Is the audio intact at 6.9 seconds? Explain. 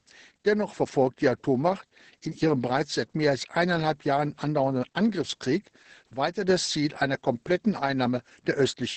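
No. Opus voice compression runs through the whole clip, including 6.9 s. The SILK coder, working at what sounds like about 10 kbps, codes the excitation coarsely, making speech muffled, hoarse and slightly robotic. A spectrogram shows energy cut off near 8 kHz with blurred harmonics.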